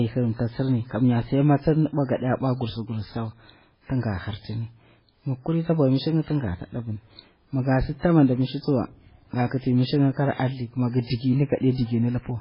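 Speech with MP3 compression damage running through the whole clip: nothing is present above 5.3 kHz, and the heavy watery, swirling texture with smeared consonant onsets is likely from an encoder starved of bits, consistent with a bitrate around 16 kbps.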